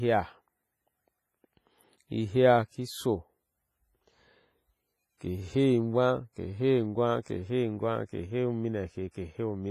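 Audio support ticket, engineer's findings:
Ringing, washy texture across the whole speech clip. Hiss rises and falls with the signal. Smearing spreads over tens of milliseconds around each onset. Heavy damage. No content above 15.5 kHz. Likely WMA compression, sound fits the early WMA 1 encoder at a low bitrate near 24 kbps. Long transform blocks spread quantisation noise in time. Weak spectral lines are zeroed, leaving the thin, swirling residue.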